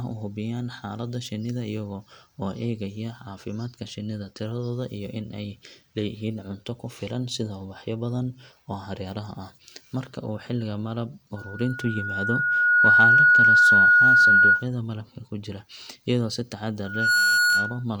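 A steady 1.4 kHz tone swells into a loud squeal over the speech from 11.36 to 14.67 s, between "uu xilliga malab" and "malabka ku jira iyadoo", and again, rising faster, from 16.84 to 17.84 s after "ku jira iyadoo si". This is loudspeaker feedback squeal: the microphone picks up its own loudspeaker, and the loop runs away at that one frequency.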